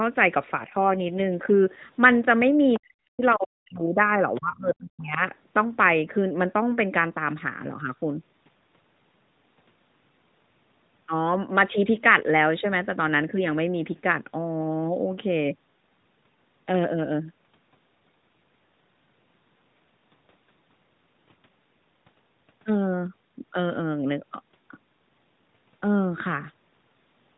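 A speech clip. Between 0.6 and 1.83 s an AMR rate drop cuts the narrowband codec from 12.2 to 5.9 kbps, spending fewer bits on the voice itself. The band stays the same and nothing goes silent, but the voice turns rougher and more synthetic until the rate recovers. Three short bursts of the other side's voice leaking through, faint at about 20 to 25 dB below the talker, sit at 2.74 to 2.79 s, 3.30 to 3.35 s and 4.35 to 4.39 s. They are likely loudspeaker sound that the echo canceller failed to remove from the microphone, and they come through as scraps. Overlapping them, from 2.79 to 5.21 s, the talker's speech is suppressed in double talk. With both sides speaking at once, the canceller apparently cannot separate the talker from the echo and turns both down. The talker's voice dips and breaks up in pieces over roughly two seconds in total, falling by around 40 dB at the deepest point.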